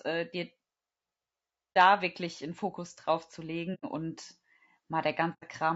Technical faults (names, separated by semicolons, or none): low-delay AAC compression; AAC frame loss with muting